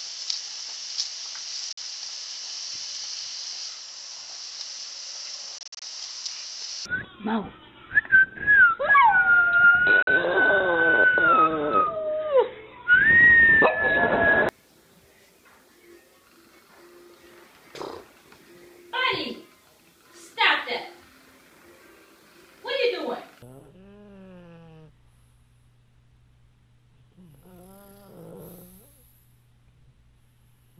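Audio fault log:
1.73 s: Bluetooth dropout. About 46 ms of silence, likely from late wireless packets. The sound resumes further along, not where it stopped, so this is not a stall.
5.58 to 5.82 s: Bluetooth dropout. Several short holes totalling about 139 ms, each under 47 ms, with the sound skipping ahead after each one.
10.02 s: Bluetooth dropout. A single hole of about 46 ms, after which the sound carries on as though it had kept playing.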